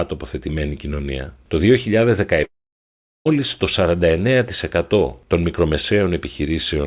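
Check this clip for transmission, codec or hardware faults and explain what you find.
There is one transmission fault, a long network dropout, heard through a call path whose sound stops near 4 kHz, consistent with G.711 narrowband coding. From 2.44 to 3.27 s the speech breaks off. The receiver stretches the last sound into a brief fading buzz or hiss before near-silence, likely because about 0.82 s of packets never arrived. Unlike a short concealed packet loss, the gap is long and the speech resumes with that section skipped rather than delayed.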